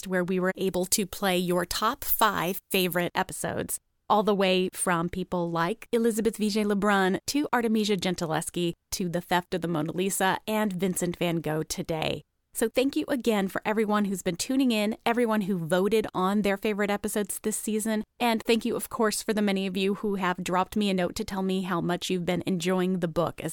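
Speech, with pre-emphasis left on from 0.68 s to 3.00 s. In that stretch the treble is lifted by about 10 dB at 10 kHz relative to 1 kHz, so the sound turns thin and bright and the sibilants hiss and spit. The boost was applied ahead of recording or transmission and the complementary de-emphasis was never applied on playback. The shape of the lift fits the 50 µs curve used for FM broadcast.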